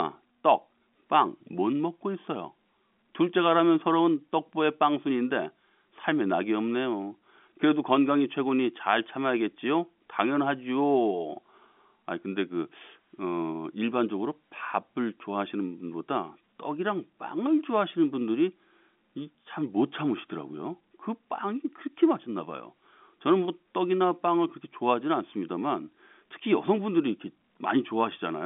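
There are no technical faults to describe, so there is nothing to place in time order.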